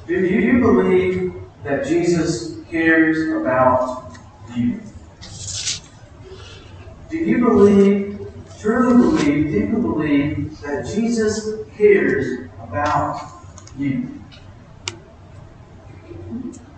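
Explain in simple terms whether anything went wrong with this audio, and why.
Something did go wrong: there are repeated frames, where small chunks of the compressed audio got played twice. You hear a quick stutter at 0.39–0.48 s, a bit under a tenth of a second, and shorter hiccups at 7.70–7.72 s and 12.25–12.27 s.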